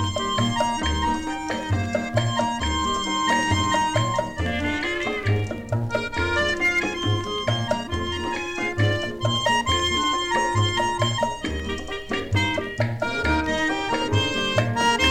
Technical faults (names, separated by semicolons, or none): none